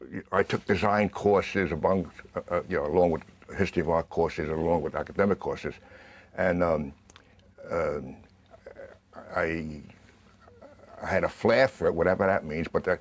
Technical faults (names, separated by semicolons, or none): none